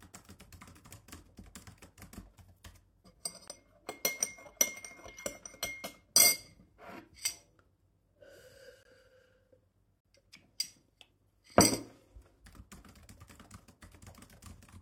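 Damaged compressed frames that the decoder rejected are the cause of three corrupt frame muted dropouts in these everyday sounds. The player substituted silence and kept the timeline intact, so each gap cuts in abruptly rather than fading. The first runs from 3.48 to 3.52 s, about 40 ms, consistent with a single lost frame. The second, 8.82 to 8.86 s, lasts about 38 ms and sounds like a short run of frames going missing. The third, at 10.04 s, is a near-instant hole.

At 12.26 s, flipped bits in one frame went undetected and the decoder played it anyway, a corrupt frame decoded event. Misread values pushed energy into the wrong frequencies for roughly one frame's span, so the sound carries a brief stray artifact, faint at about −55 dBFS.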